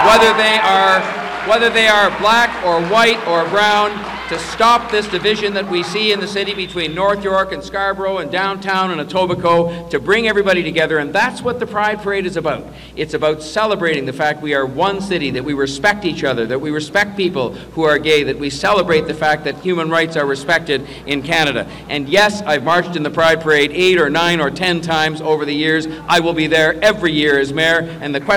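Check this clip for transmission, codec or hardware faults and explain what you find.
Hard clipping runs throughout the clip. The signal is driven about 13 dB past what a stage can pass. Its peaks are sliced flat, which touches a small share of the waveform. Those flat tops add high harmonics. Loud moments carry a harsh, crackling fuzz.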